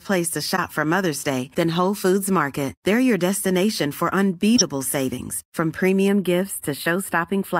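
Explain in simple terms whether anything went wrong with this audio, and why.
Two things went wrong in this speech.

The first is a corrupt frame decoded. At 0.56 to 0.59 s, and again from 4.55 to 4.62 s, between "your destination for" and "savings from", a short, loud chirpy blip cuts in. The audio was stored in compressed chunks, and a few of them were damaged but played anyway, so sound lands at the wrong pitches. Unlike a simple click or a dropout, the burst has its own tone and lasts about as long as the broken chunks.

The second is channel delay (comb filtering). From 6.08 s, just after "savings from", to the end, the voice turns hollow and thin at the top. One side of the stereo arrives a tiny fraction of a millisecond late, and when the two sides are combined, some high frequencies cancel, starting around 7 kHz. Unlike a muffled sound, the loss comes in regular gaps in the treble and does not simply fade toward the top.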